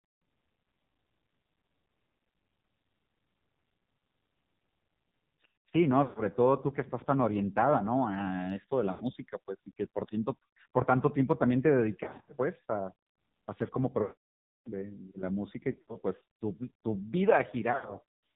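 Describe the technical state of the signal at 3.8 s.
At 3.8 s, as throughout, the AMR narrowband mobile codec, at a low rate that fits about 6 kbps, cuts everything above 4 kHz and leaves the speech buzzy and synthetic.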